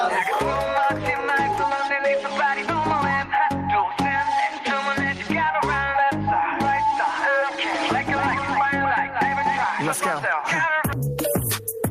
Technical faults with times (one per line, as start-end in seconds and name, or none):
0.00-11.91 gain pumping
7.72-9.64 doubled audio track